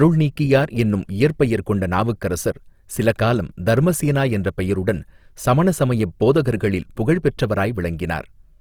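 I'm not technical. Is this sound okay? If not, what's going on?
No. The speech was most likely squeezed hard by Opus compression, which spends too little data on each stretch of sound and patches the gaps with borrowed or noisy detail. Throughout the clip, the voice sounds plainly grainy, rough and noisy.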